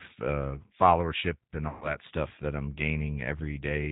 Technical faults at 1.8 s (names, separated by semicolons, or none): G.729 codec; VoIP packet loss concealed by the speech codec